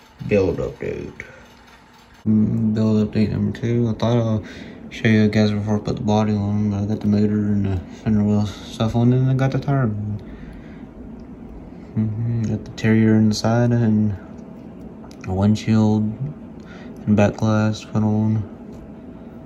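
Nothing goes wrong anywhere in this one, so there's no fault to walk through.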